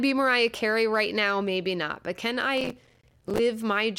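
From 2.58 to 3.39 s, just after "not but can", processor overload crackle tears through the speech. Many short buffers of roughly 5 ms miss their deadline and drop to silence, leaving gritty crackle. The waveform shows many tiny gaps, and the spectrogram shows dense vertical broadband streaks.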